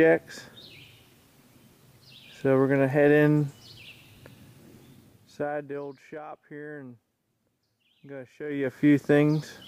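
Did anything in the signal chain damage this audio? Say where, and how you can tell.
Yes. Zipper noise appears at the driver or buffer stage from 8.36 to 8.84 s, where the level changes by roughly 20 dB in 1 dB steps at around 50 steps per second, which fits a gain value updated once per audio buffer with no smoothing between updates. Each jump leaves a tiny click, heard as a ticking zip over the sound. On a waveform the envelope forms a staircase, and a spectrogram shows faint broadband vertical lines at that regular spacing.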